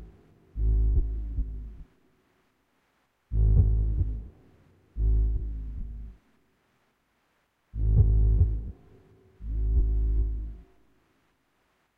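Nothing here calls for comment, as no technical faults turn up anywhere in this recording of sounds.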